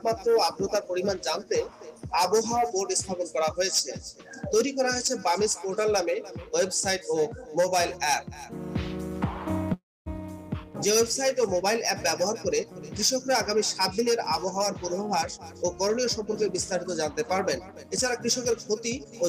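At 9.73 s the sound stops and a call audio freeze follows. The last sound carries on briefly and then gives way to about 0.24 s of silence. At 10.08 s the audio resumes exactly where it stopped, so nothing is lost. About 0.33 s of delay has been added. The likely cause is packets held up in transit, which let the jitter buffer run empty.

Jitter buffer speed-up follows in three stretches, with no change in pitch. From 13.80 to 14.60 s the sound runs 10% fast. From 15.03 to 16.43 s it runs 6% fast. From 17.72 to 19.22 s it runs 4% fast. Tiny pitch-period slices are cut repeatedly to shed the excess delay. Each stretch removes roughly a tenth of a second or less, and the first two stretches sound hurried.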